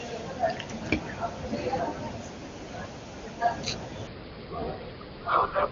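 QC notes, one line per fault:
4.07 to 5.71 s, section at the wrong speed: the final stretch of speech runs at 0.744 times its recorded rate, so it drags and drops by roughly five semitones, pitch and tempo sinking together, likely from playback against a mismatched clock.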